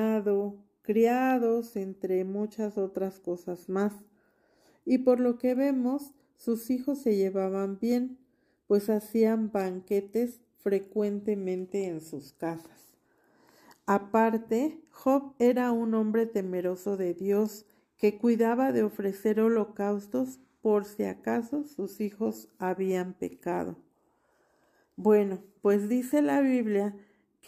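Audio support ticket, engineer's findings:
No fault found in this audio; nothing to report.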